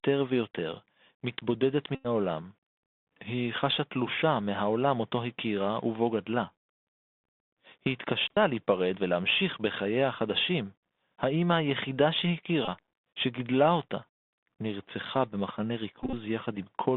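Speech heard through a Bluetooth CVSD headset codec, with several bursts of Bluetooth headset packet repeats. The whole clip sits in a narrow telephone band of roughly 200 Hz to 3.6 kHz. The damage that marks it as CVSD rather than an ordinary narrowband codec is plainly audible: a granular hiss under the voice, scratchy s sounds, and harsh distortion on loud bright passages. That distortion comes from the one-bit delta modulator, whose adaptive step can't keep up with fast, large swings, which fits a 64 kbps headset link. The packet repeats come at 1.95 to 2.07 s, 8.34 to 8.38 s, 12.65 to 12.68 s, and 16.03 to 16.14 s. The last is broken up, with its longest run around 30 ms. In each one the chip re-decoded the previous packet's bits to cover lost ones, and repeating every 3.75 ms produces a short, steady buzz near 267 Hz. A plain dropout would leave silence or a click, not a pitched buzz.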